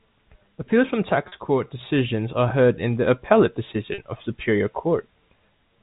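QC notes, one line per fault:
1.28–1.32 s and 3.94–3.98 s: packet loss with pitch repetition. Each gap is 40 ms, which fits two lost 20 ms packets. The receiver bridged each one by repeating the last pitch period of the preceding speech, so both spots sound like a brief, slightly held, buzzy tone rather than a dropout. The 40 ms gap is shorter than the fade-out, so the speech resumes before any silence appears. The surrounding G.711 telephone-band audio carries through on both sides.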